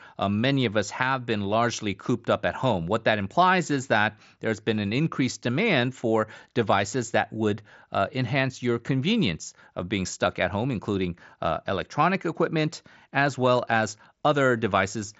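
No technical faults can be heard anywhere in the speech. It comes through a Bluetooth mSBC headset link, which caps the band at about 7.7 kHz, so the upper range is simply absent.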